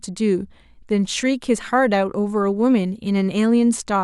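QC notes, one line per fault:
No faults heard.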